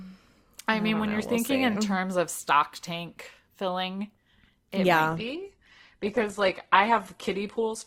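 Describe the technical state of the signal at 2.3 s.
At 2.3 s the audio is intact, with no dropout, clipping, distortion or other fault present.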